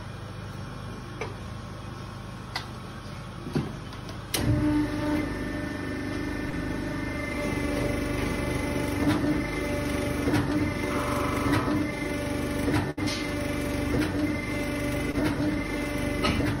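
At 6.49 to 6.54 s and again at 15.11 to 15.16 s there is short concealed packet loss. The receiver bridged about 31 ms, then 21 ms, by extending the preceding sound, leaving a brief smear or wobble. About 40 ms, then 20 ms, of real audio is gone.

From 12.90 to 12.99 s a burst of packet loss hits. The receiver extended the last sound for about 67 ms while fading it, heard as a held buzz or dying hiss, then jumped ahead, skipping roughly 60 ms. The waveform shows a decaying stretch before the real audio resumes.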